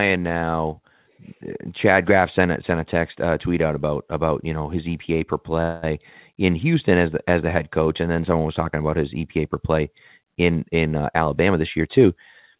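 At 5.62 s the sound stops moving forward for 205 ms, until 5.85 s. The last sound is drawn out as a buzz or hiss that fades. This is a call audio freeze, likely delayed packets draining the jitter buffer. The audio then resumes where it stopped, so nothing is lost, only delayed.

From 11.14 to 12.05 s comes a jitter buffer speed-up. The buffer held too much audio, so the receiver cut many short pitch-period pieces, about 70 ms in total. The audio runs at 108% speed, hurried but at unchanged pitch, within the call path's 4 kHz band.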